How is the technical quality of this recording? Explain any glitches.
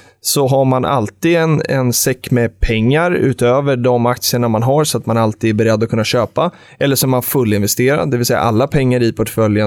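Listening to the whole recording, nothing stood out as a technical fault or glitch.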